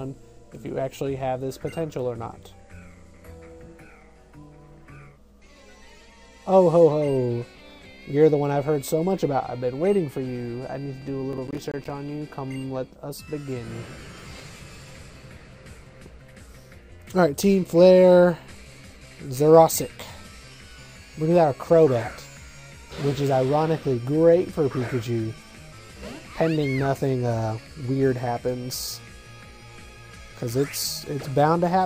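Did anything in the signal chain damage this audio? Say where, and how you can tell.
Yes. The audio driver's buffer processing fell behind: from 11.33 to 11.90 s, processor overload crackle appears as a rapid string of hard-edged silent dropouts, around ten of them, each roughly 10 ms long. That spacing fits missed buffer deadlines, producing a gritty tearing over the sound.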